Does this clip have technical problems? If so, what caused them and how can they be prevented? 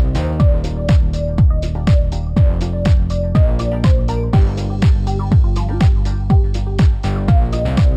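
Yes. Imaging from linear upsampling runs through the whole clip. The top of the band is dulled, and a faint mirror copy of the spectrum sits in the 6 to 12 kHz region, far below the main signal. This fits audio at a 12 kHz rate raised to 44.1 kHz by joining samples with straight lines, a filter too weak to remove those copies. Unlike aliasing, where content folds down into the band, these images lie above the original content and mirror it upward. A plain low-pass would also sound dull, but it would not add this light metallic shimmer. To prevent it, resample with a proper band-limited filter, such as a windowed-sinc or polyphase resampler.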